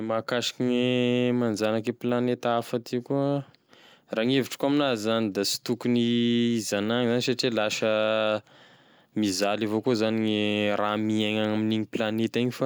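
No technical faults can be heard anywhere in the speech, so there is nothing to place in time order.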